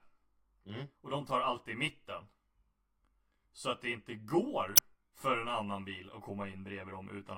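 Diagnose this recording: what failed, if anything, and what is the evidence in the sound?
A channel delay of around 20 ms, summed to mono, runs through the whole speech clip. It most likely comes from a buffer or driver stage offsetting one channel. The comb-filter notches start near 30 Hz and repeat about every 50 Hz, giving a rough, slightly doubled tone. Unlike room reverb, those notches stay fixed.

Damaged data in a compressed stream shows up from 4.76 to 4.79 s as a brief glitch, about 30 ms long. This points to the codec or storage stage, where the decoder misreads corrupted frames and resynchronises.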